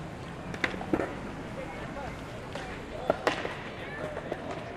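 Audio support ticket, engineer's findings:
Lost LE Audio frames, 0.96–1.12 s and 3.72–3.77 s. The sound smears into noise where roughly 80 ms is missing, scattered over 160 ms with gaps up to about 30 ms, then 50 ms in one stretch. The LC3 decoder concealment reuses the last spectrum with random signs. The losses fit 10 ms LE Audio frames.

Audio missing between chunks, 2.43 s, 3.38 s, 4.33 s. Hard skips in the everyday sound, each about 50 ms, spaced about 1 s apart, with the two sides butted together without silence. Likely cause: the recorder or processor dropping audio at 1 s chunk boundaries, with light lossy-compression damage alongside.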